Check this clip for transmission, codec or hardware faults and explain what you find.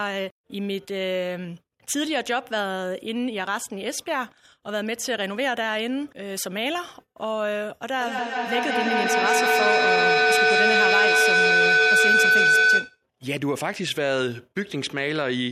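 One fault stands out, a feedback howl from 7.92 to 13.04 s. A microphone-to-loudspeaker loop gained level on each trip, so repeats grew instead of fading and narrowed into a tone around 1.5 kHz. It repeats roughly every fifth of a second and peaks about 8 dB above the speech.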